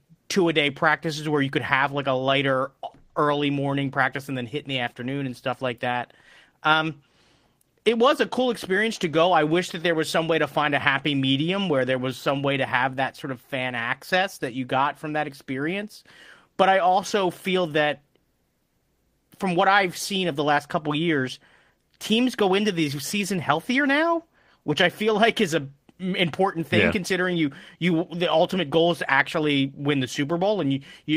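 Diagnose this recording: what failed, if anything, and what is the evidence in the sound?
Nothing failed in this recording, and the sound gives no evidence of a fault at any stage.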